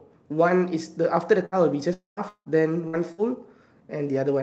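A burst of packet loss at 1.45 to 1.56 s drops about 60 ms. The receiver stretches the last sound into a brief fading buzz or hiss before the sound jumps ahead.

A long network dropout is the likely cause of gaps at 1.93 to 2.20 s and 2.29 to 2.49 s, losing about 240 ms and 180 ms. Each fades from a held buzz or hiss into silence lasting about 140 ms and 80 ms.

Further bursts of packet loss at 2.88 to 3.01 s and 3.12 to 3.21 s each lose about 60 ms, concealed by short fading fills.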